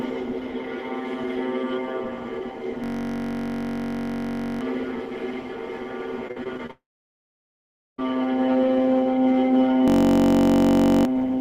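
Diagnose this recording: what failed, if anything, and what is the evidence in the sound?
System hang loop, 2.84 to 4.61 s and again 9.88 to 11.05 s. Both stretches collapse into a steady buzz at 46.9 Hz: one 21.33 ms slice of sound repeating exactly, which fits a 1024-sample buffer. This points to the driver or buffer stage. The host stopped supplying new data while the sound hardware kept replaying the same ring buffer. Roughly two seconds of real audio are lost in the first hang and about one second in the second.

Repeated packet loss (robotic sound), 6.27 to 6.71 s. The sound turns choppy, with several short holes in quick succession. The longest hole is 45 ms, and about a quarter of the span is patched over. This is a network-stage fault: packets repeatedly arrived late or not at all. Each gap was concealed by extending the last received sound, and the next loss followed before the signal could settle.

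Long network dropout, 6.71 to 8.04 s, directly after the choppy stretch. The sound carries on briefly as a fading continuation of the last fragment. It then falls to near silence for about 1.18 s before normal audio resumes, with the missing portion simply gone. The likely cause is an extended network outage. No packets reached the receiver, so its concealment ran out and it fell back to silence until the stream returned.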